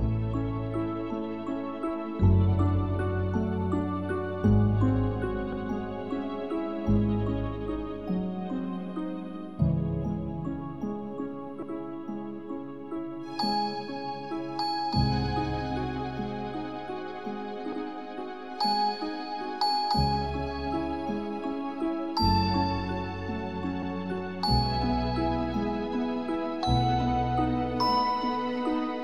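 Overlapping chunks at 5.52, 11.62, 17.72 and 23.83 s: the audio was handled in 6-second chunks, each starting 100 ms before the previous one finished, so a 100 ms slice plays twice at every join. This is heard as a brief stutter every six seconds.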